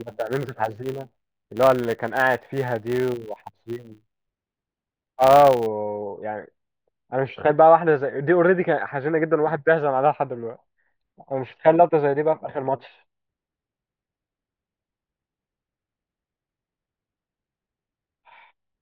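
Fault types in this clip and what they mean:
Filter restarted on every block: the filter discards its internal state at each block boundary and starts from silence, so every block opens with a small transient. Here those transients repeat at 100 Hz, which points to blocks about 10 ms long, and they merge into a buzz that rises and falls with the loudness of the speech. The buzz runs from the start of the clip to 5.67 s.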